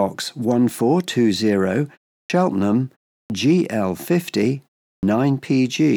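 At 2.24, 3.25 and 4.97 s, clipped starts after pauses drop 50 to 60 ms of onset while the output wakes; the waveform jumps from silence straight into speech.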